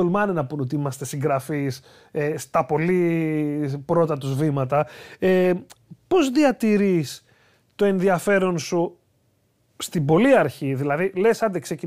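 No technical faults can be heard anywhere in the speech. There is nothing to place in time and nothing to trace to a cause.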